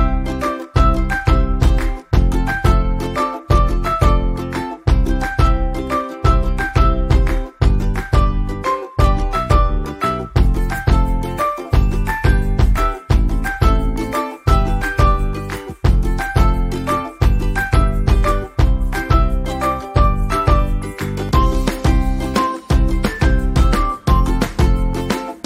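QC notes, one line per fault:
No faults heard anywhere in the audio.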